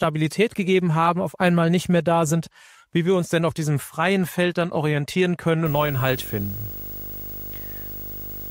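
Video or display buzz enters at 5.66 s and runs to the end: a fairly loud 50 Hz field-rate buzz with hash and a 15.6 kHz line tone. That line tone separates it from plain mains hum.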